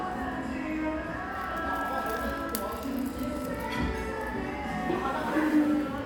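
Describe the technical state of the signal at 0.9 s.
At 0.9 s the sound is intact, with no audible dropout, distortion, glitch or other technical fault.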